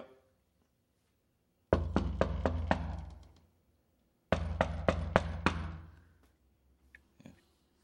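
A recording of sounds where the level pumps throughout, swinging around 10 dB. This is gain pumping, likely from input gain set far too high and a fast limiter clamping down, squashing loud and soft parts together.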